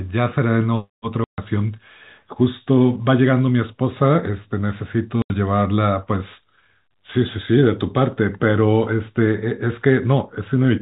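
Packet loss filled with silence: dropped packets left silent holes at 1.24 to 1.38 s and 5.22 to 5.30 s, 140 and 80 ms long, fitting 20 ms packets, with hard edges.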